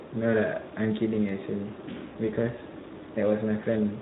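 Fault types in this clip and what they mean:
Speex codec: a CELP speech codec working here at what sounds like about 11 kbps, starving the excitation of bits, so the speech turns plainly hoarse and noisy. A spectrogram shows smeared harmonics.
CD scratch ticks: a disc blemish destroying more data than error correction can rebuild, patched by interpolation or muting. Three short ticks fall between 0.85 and 1.29 s, the longest around a millisecond, showing as thin vertical lines on a spectrogram and tiny gaps in the waveform.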